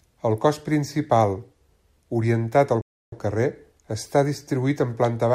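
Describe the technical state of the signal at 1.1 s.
At 1.1 s the speech signal is intact, with no dropout, distortion or other fault audible at that point.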